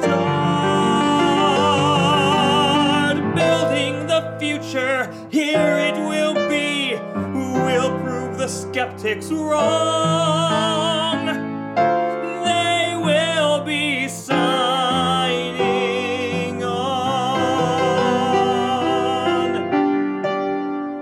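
Nothing goes wrong anywhere in the clip, so there's no technical fault to point out.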